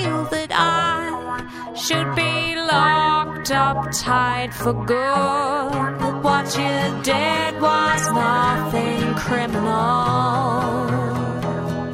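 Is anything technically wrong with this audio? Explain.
No, nothing in this audio points to a technical fault. No working path is listed to comment on, and nothing audible calls for further explanation.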